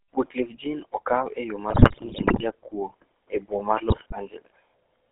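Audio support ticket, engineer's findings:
GSM full-rate codec throughout. Buzzy, gravelly speech band-limited to 300 Hz–3.4 kHz. Regular-pulse excitation coding, consistent with a 13 kbps full-rate path.

GSM bit errors at 1.70–2.43 s and 3.90–4.13 s. Squawks, pops, gargling. Corrupted filter, pitch and gain parameters distorting frames; heavier in the first burst.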